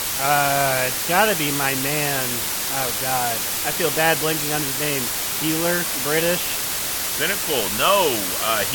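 Throughout the speech, low bit depth with dither at 4 bits turns rounding error into steady white hiss, roughly as loud as the voice itself, without distortion.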